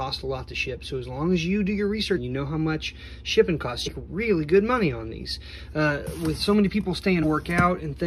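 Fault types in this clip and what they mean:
Damaged data in a compressed stream: corrupted bytes in the encoded file make the decoder misread or reject frames and hunt for the next valid frame header, disrupting the audio at 2.16–2.18 s, 3.86–3.88 s and 7.22–7.24 s. Each event spans roughly 20 ms, about one frame of decoded audio, rather than the single-sample tick of an isolated click, because the decoder loses a whole frame while it regains sync.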